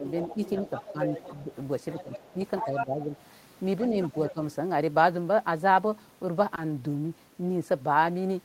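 Speech runs through four stretches of level dipping, at 0.00 to 0.38 s, 0.92 to 1.50 s, 2.03 to 3.12 s and 3.90 to 4.39 s. The dips reach about 10 dB, and about 5 dB in the second stretch. This is likely speech suppressed in double talk. Unlike a plain gain drop or dropout, the dips land only where a second voice overlaps. A second voice sits under the talker from 0.07 to 3.04 s, only about 5 dB down, and returns fainter, about 15 dB down, from 3.82 to 4.32 s. This is likely the other side's voice leaking through from a loudspeaker. It is a separate talker with its own sound, not a delayed repeat of the main voice as in room reverberation. Around 6.55 to 6.59 s a brief smear fills roughly 20 ms of missing audio. This is short concealed packet loss. The sound is continued and blended back, rather than left as the hard silence or click of an uncovered dropout.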